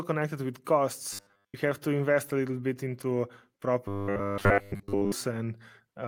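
Robotic sound from repeated short buffers hits this speech clip at 1.13 to 1.55 s and 3.88 to 5.12 s, likely from audio arriving too seldom, so most of the real signal is skipped while a 10 ms slice loops, imposing a rigid 100 Hz metallic buzz.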